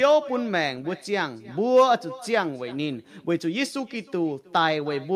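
Speech, carrying an echo with no canceller for its whole length: every phrase returns roughly 300 ms later as a thin copy about 22 dB down. The far end's loudspeaker output is being picked up by its microphone and sent back across the network unremoved.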